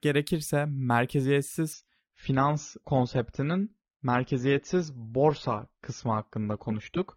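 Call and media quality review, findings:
Speech abruptly dulls, no gap, nothing above 6.9 kHz, from 1.73 s to end. Adaptive stream at a lower bitrate: player dropped to a leaner AAC rendition, which fits a step from 96 to 24 kbit/s.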